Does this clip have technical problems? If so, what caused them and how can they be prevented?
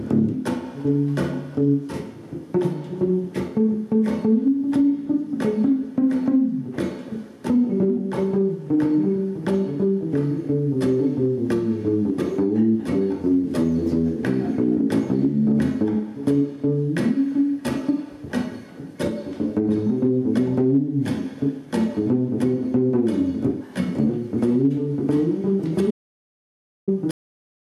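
Yes. An audio dropout to silence runs from 25.91 to 26.88 s: about 0.97 s falls to pure digital silence with no room tone, likely from a lost input link or momentary mute while recording continued. Securing cables and connections and monitoring the input level during capture prevents this.

A cut-off end occurs at 27.11 s, where the sound stops abruptly into digital silence with no natural decay because the final buffers were never written. Letting recording run a few seconds past the end and stopping it cleanly prevents this.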